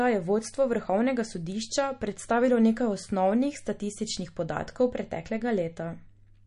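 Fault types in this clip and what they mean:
MP3 compression: an MP3 encoder running short of bits is the likely cause, cutting the treble and dropping weak frequency lines from frame to frame. The speech has nothing above 10.6 kHz and a plainly audible watery, swirly texture, which fits about 40 kbps.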